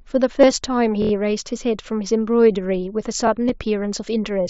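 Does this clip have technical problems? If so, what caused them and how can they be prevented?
Yes. Concealed Bluetooth headset packet loss occurs from 0.41 to 0.43 s, a gap of about 22.5 ms that fits a short run of three lost frames, and again at 3.48 s, a single 7.5 ms loss. The receiver fills each hole by copying the closest-matching recent stretch of waveform. The short one is nearly hidden. The longer run gives a brief buzzy tone with a slight warble as real audio resumes. On a waveform the patch shows as repeated cycles. On a spectrogram it appears as evenly spaced harmonic lines. Keeping the headset close to the phone with a clear line of sight, away from Wi-Fi congestion, prevents this.

A repeated buffer runs from 1.02 to 1.12 s. The same 23.2 ms piece, which fits a 1024-sample buffer, plays four extra times because new audio arrived late, and little or no audio appears lost. It sounds like a rapid stutter with a hard join at each repeat. 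A waveform shows identical blocks with abrupt edges. A spectrogram shows vertical click lines about 23 ms apart. Raising the playback buffer size or lowering system load prevents it. The mSBC headset codec limits the band to 8 kHz.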